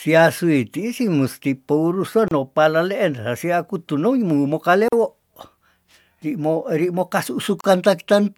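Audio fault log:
2.28 to 7.64 s, gap at a join of encoded pieces, three times: 2.28 to 2.31 s (31 ms, between "ih si musti pourese" and "no palaleen hesia kutuno"), 4.88 to 4.93 s (41 ms), and 7.61 to 7.64 s (34 ms, after "ri mo kasu"). The speech drops to silence with smeared edges, then resumes where it stopped. Each separately encoded piece kept its encoder's start delay and last-frame padding, so those silences remain at the joins.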